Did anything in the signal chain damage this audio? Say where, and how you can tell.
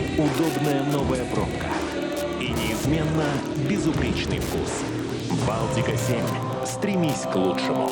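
Yes. Wi-Fi interference got into the analogue wiring: a steady tick about every 102.4 ms, roughly ten per second, runs through the whole clip about 20 dB below the signal. A nearby Wi-Fi radio's beacon is being picked up and rectified by the analogue circuitry.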